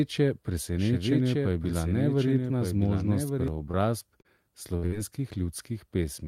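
It's a speech clip, and right from the start there's a doubled audio track: a second full-band copy sits roughly a second behind, about 5 dB quieter, with no reverb tail or room colour, and it cuts off abruptly at 3.48 s, likely a second capture path or an edit holding two copies out of sync. Then come two bits of short concealed packet loss, at 3.71–3.75 s and 4.21–4.27 s. The receiver papered over 18 ms and 33 ms holes by stretching the last sound, so you get a quick smear or wobble before things blend back in. Right after, at 4.77–4.84 s and 4.86–4.94 s, there are two bursts of packet loss. About 60 ms goes missing each time, and the concealment holds the last sound as a buzz or hiss that fades out before the audio resumes further along.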